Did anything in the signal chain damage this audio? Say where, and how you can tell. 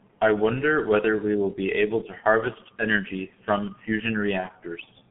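Yes. Throughout, the speech sounds muffled and hoarse with smeared consonants, and it is band-limited to 150 Hz to 3.4 kHz. This is G.723.1 codec damage at roughly 6.3 kbit/s.

From 4.40 to 4.49 s the sound is briefly stretched and fades. This is VoIP packet loss concealed by the speech codec, consistent with one lost 30 ms frame being extrapolated.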